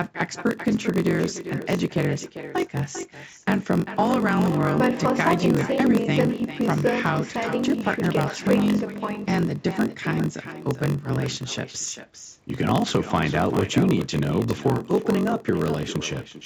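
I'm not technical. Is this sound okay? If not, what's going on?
No, it isn't. Two things go wrong for the whole clip.

The first is echo with no canceller. On the far end of the call, the sound played through a loudspeaker and was picked up again by the microphone, and nothing in the system removed it. You hear every phrase followed, roughly 400 milliseconds later, by a fainter, thinner copy of itself.

The second is a block size mismatch, padded with silence. One part of the system hands audio along in smaller chunks than the next part expects, so each chunk gets a tiny gap of silence added to fill it out. Those regular gaps make a low buzz, about 47 times a second, running under the speech. The speech also plays about 6 percent too slowly, while the character of the voice stays the same. The mismatch fits a stage reading 1024-sample blocks.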